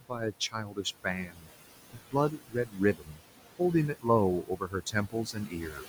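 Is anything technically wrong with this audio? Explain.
Yes, the speech has been processed too hard by a noise suppressor.

Noise suppressor artifacts run through the whole clip, cutting the noise by about 17 dB. The suppressor works frame by frame, lowering the bands it judges to be steady noise. The room noise, about 14 dB below the speech, therefore drops away in the gaps and swells back under the speech.

Speech cut by the noise suppressor occurs at 0.0–0.86 s, 1.03–1.51 s, 1.9–2.14 s, 2.31–3.22 s and 4.43–5.89 s. The suppressor mistook quiet speech for noise and turned it down along with the background, by about 16–18 dB at worst. Parts of each span, half a second or less in all but the last, sound swallowed or faint.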